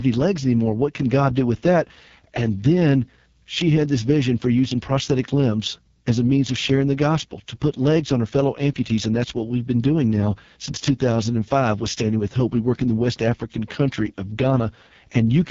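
Speech carrying AMR wideband (HD Voice) codec damage throughout, rough and raspy with nothing above 7.3 kHz, which points to the lowest 6.6 kbit/s mode.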